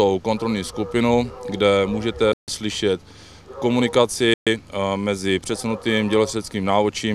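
At 2.33 s the sound drops abruptly into silence for about 144 ms, then resumes at 2.48 s, and at 4.34 s it happens again, a 128 ms gap ending at 4.47 s. Both are hard cuts with no fade. This is likely a Bluetooth stall: radio interference delayed packets to the headphones, their buffer emptied, and playback halted until the resent data arrived, so the audio picks up from where it stopped or slightly later.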